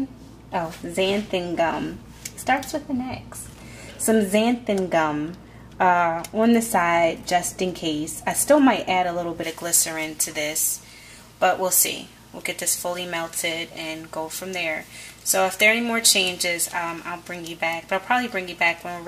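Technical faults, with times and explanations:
9.43 to 19.07 s: pre-emphasis left on. From this point to the end, the treble was boosted before transmission and the matching de-emphasis cut never restored it, leaving 10 kHz about 11 dB above 1 kHz, a tilt consistent with a J.17 curve, so the sound turns thin, bright and sibilant.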